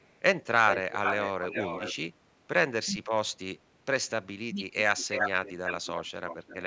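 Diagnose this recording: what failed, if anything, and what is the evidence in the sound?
Echo leak at 0.0–0.2, 0.67–1.94, 4.78–6.11 and 6.27–6.57 s: a delayed copy of the speech trails it by 235 ms, then 395 ms, then 330 ms. It is barely audible at first, later only about 5 dB below the speech, and about 15 dB below at the end. The likely cause is an echo canceller in call processing letting loudspeaker pickup back through.

Speech suppressed in double talk at 2.89–3.16 s and 4.51–4.63 s: the speech dips by about 30 dB for roughly a third of a second, then by about 15 dB for roughly a tenth. The call-processing echo canceller likely mistook overlapping talk for echo and turned it down.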